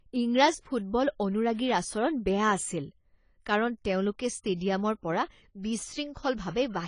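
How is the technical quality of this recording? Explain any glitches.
The speech is plainly degraded from start to finish by one coding fault. It sounds dull, with nothing above 10 kHz, and sibilants and sustained sounds have a fizzy, warbling smear. The likely cause is AAC compression: at a rate that fits roughly 24 kbps, the encoder drops the top band and coarsely quantises what remains.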